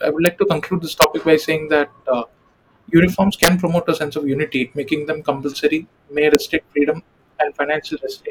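A gain stage in this speech clip exceeds its largest integer value and wraps to the opposite sign instead of limiting, an integer overflow. Peaks then flip across the full range as violent cracks, much sharper than clipping. This happens at 0.26 s after "i would", at 1.02 to 1.04 s between "to conclude this" and "topic by saying that", at 3.43 to 3.48 s just before "promote a sense of", and at 6.35 s. The worst is about 4 dB over the limit.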